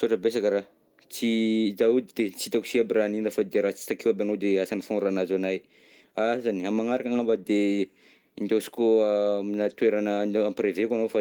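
A speech clip with clock drift between sender and receiver: the sender's clock runs about 3% slow, so the receiver's jitter buffer keeps draining. Unlike random network jitter, the hiccups all push the same way and recur unevenly through the whole recording rather than clustering. The result is a run of repeated timing corrections from 0.20 s to 11.06 s. Short pieces are repeated to fill the gap, stretching the sound to 97% speed and adding roughly 0.4 s overall. A plain resampling slowdown would lower the pitch smoothly, but here the pitch stays put.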